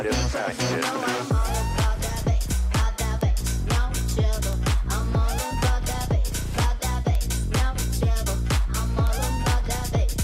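Five isolated sharp ticks cut through the audio at 3.21, 4.53, 5.93, 7.15 and 9.07 s. Each is a single broadband click with no relation to the surrounding sound, jumping to about -10 dBFS and vanishing at once. These are bit error spikes. A flipped bit in memory or on a digital link throws one sample's value off by a power of two before the next sample returns to normal, which fits a single corrupted sample at each point.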